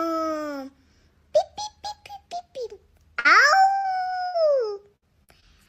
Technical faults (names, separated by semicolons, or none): burst of packet loss; repeated packet loss (robotic sound); short concealed packet loss